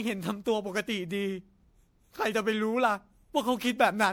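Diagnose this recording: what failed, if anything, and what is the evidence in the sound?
The codec stage failed, through generation loss. Throughout the speech, the sound is swirly, smeared and hollow, with blurred attacks, worse than one pass at 96 kbit/s would give. The likely cause is MP3 re-encoded around five times, each pass adding fresh quantisation damage.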